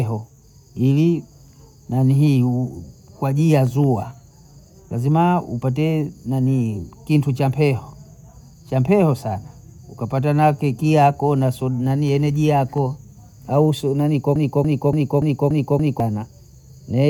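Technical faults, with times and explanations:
14.36–16.0 s, broken-record loop: a 287 ms fragment of speech repeats exactly six times back to back, likely from a stalled player resending its last buffer.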